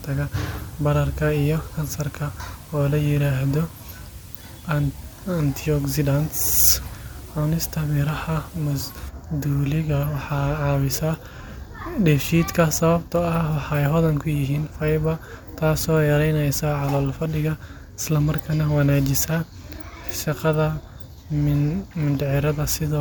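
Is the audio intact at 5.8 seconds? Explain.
No. At 5.8 seconds two faults overlap.

The first is low bit depth with dither, running from 0.0 to 9.09 s. The speech is carried by only a few bits, with dither added before rounding, so the quantisation error becomes a steady white noise floor instead of distortion. It is heard as a constant, even hiss sitting roughly 25 dB below the speech. That level fits an 8-bit signal. The hiss stops at 9.09 s.

The second spans the whole clip, including this moment. The speech sounds swirly, smeared and hollow, and consonant attacks are blurred. This is more damage than an MP3 stream around 130 kbit/s would cause in a single pass. The likely cause is generation loss: the audio was decoded and re-encoded with MP3 around four times, and each pass quantised afresh on a shifted frame grid, so noise and spectral holes accumulated.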